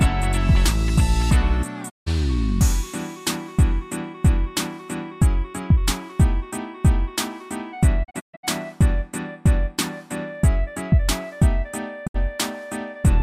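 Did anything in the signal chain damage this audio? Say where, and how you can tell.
Yes: digital broadcast dropouts at the reception stage. The receiver lost frames and muted until good ones returned, fading out over about 20 ms each time: 1.88 to 2.08 s, several scattered holes over 8.03 to 8.45 s, and 12.06 to 12.16 s. What was sent there is gone.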